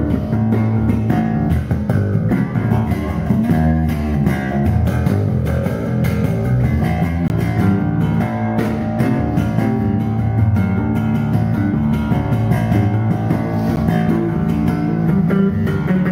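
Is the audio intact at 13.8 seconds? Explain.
No. At 13.76 s there is a block of digital silence: a 10 ms run of samples replaced by zeros. The signal drops out and returns without any fade, and the whole gap is heard as a brief tick.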